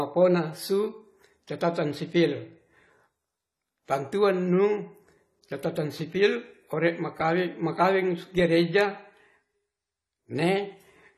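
Throughout, the speech sounds dull and smeared with a fizzy edge on sibilants and nothing above 14 kHz, likely AAC compression at a low bitrate, around 32 kbps.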